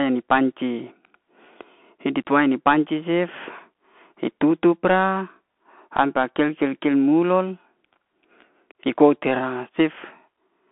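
Throughout the speech, the Bluetooth CVSD headset codec confines everything to 200 Hz to 3.4 kHz. Its one-bit up-or-down coding, which fits a 64 kbps stream, adds granular hiss and scratchy s sounds. A plain telephone band-limit narrows similarly but stays clean.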